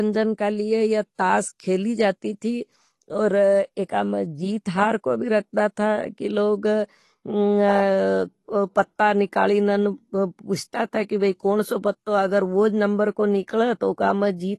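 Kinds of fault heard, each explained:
AAC compression: The speech is dull, with codec damage plainly audible throughout, likely from low-bitrate AAC-LC coding. The encoder quantises each frame's frequency lines coarsely against a hearing model, leaving the sound smeared, and the damage fits a bitrate around 32 kbps. On a spectrogram nothing appears above 12 kHz, a flat ceiling across the whole clip. The waveform looks ordinary, so the damage shows in the frequency view rather than in the amplitude trace.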